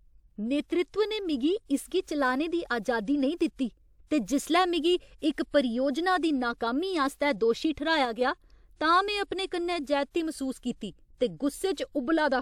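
Speech clip with two technical faults. The first is pre-echo, from 7.15 to 7.20 s, just after "परियोजना दी नाकामी". A short hiss smears about 48 ms ahead of a sharp attack, and the attack itself sounds softened. A transform codec spreads its quantisation noise across a whole block. When an attack sits late in that block, noise sized for the loud part leaks into the quiet lead-in. The second is a sudden gain jump, from 8.05 to 8.21 s. Speech and background noise drop together by about 4 dB, with no ramp. The likely cause is a digital gain setting applied from one sample to the next.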